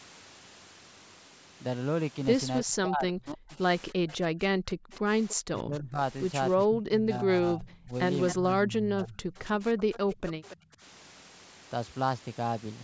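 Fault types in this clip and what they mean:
Speech suppressed in double talk: with both sides likely talking at once, the canceller ducks the speech, in places by around 40 dB, in stretches from 2.64 s to 10.82 s.
Echo leak: a faint delayed copy, roughly 275 to 290 ms late and well below the speech, likely from loudspeaker echo the canceller missed.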